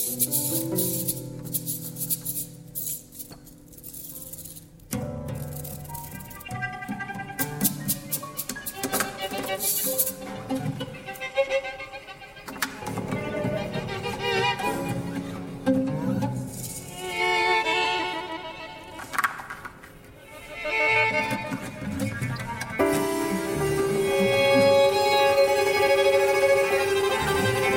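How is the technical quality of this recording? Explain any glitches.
Pretty clean apart from two short glitches, both a corrupt frame decoded, at 18.27 s and 22.36 s. Each time, a single compressed frame had damaged bits but got played anyway, so misread codes put energy at the wrong frequencies. You hear a brief chirp, squeak, blip or burst of noise, peaking somewhere around -30 dBFS.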